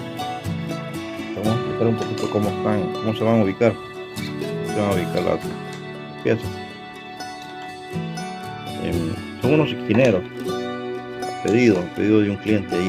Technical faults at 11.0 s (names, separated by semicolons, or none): none